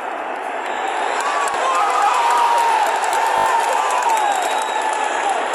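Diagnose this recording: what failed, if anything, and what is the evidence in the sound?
The failure is at the driver or buffer stage: a repeated buffer, where fresh audio missed its deadline and the device replayed its last block instead. At 1.52 s a single short segment sounds twice, heard as a click-like hiccup. At 3.38 s the same piece repeats four times in quick succession up to 3.46 s, a buzzy stutter with a hard join at each repeat, and the sound that should have followed is lost, somewhere under a tenth of a second. The repeat length fits a 20 ms buffer.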